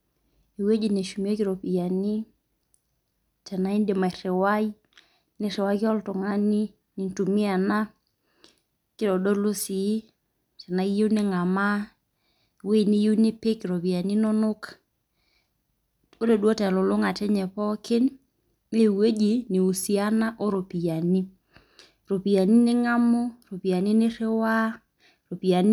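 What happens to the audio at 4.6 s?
Nothing goes wrong at 4.6 s: the speech carries on intact through that moment, with no dropout, click, distortion or glitch.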